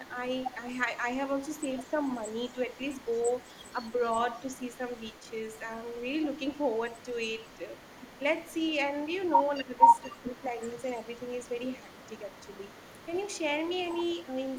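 Speech carrying an echo leak through most of its length, from 0.08 to 5.59 s, 6.51 to 8.19 s and 9.55 s to the end. A faint, delayed copy of the talking, roughly 40 dB below the direct sound, trails it by a fixed 213 ms. That steady delay separates it from room reverberation, which smears into a diffuse tail rather than repeating as a distinct copy. The likely cause is a loudspeaker at the far end whose echo canceller let part of its microphone pickup return down the line. There is also speech suppressed in double talk, from 9.58 to 10.53 s, where the level sinks by as much as roughly 20 dB across about half a second, and from 14.25 to 14.29 s, where a brief dip of a few decibels appears. Unlike packet-loss dropouts, these are partial attenuations rather than hard gaps, and both fall within a stretch where the echo is present. They likely come from the echo canceller turning everything down when it could not tell its own talker from the loudspeaker echo.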